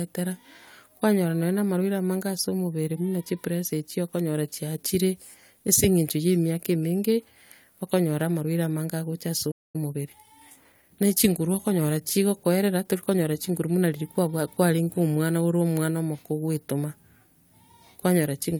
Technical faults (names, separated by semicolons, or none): playback stall; time-compressed catch-up